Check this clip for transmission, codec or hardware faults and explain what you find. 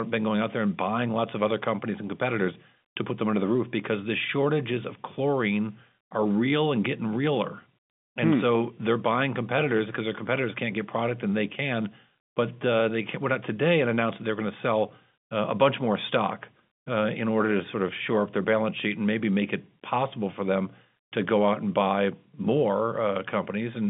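No transmission, codec or hardware faults turn up anywhere in this speech clip. It carries the marks of G.711 telephone coding, with the voice held within a line band of roughly 200 Hz to 3.6 kHz and a faint quantisation hiss riding beneath the signal and tracking its level.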